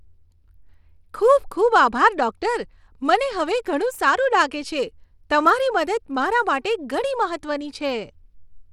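Speech, likely sent over a Bluetooth SBC link with a small bit pool near 96 kbps; throughout, coarse sub-band quantisation adds plainly audible gritty noise.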